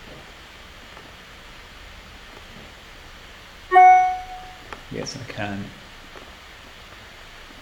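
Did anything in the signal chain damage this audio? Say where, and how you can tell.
No, nothing in the signal chain has audibly damaged this recording. No stage between capture and playback leaves any trace that points to a problem.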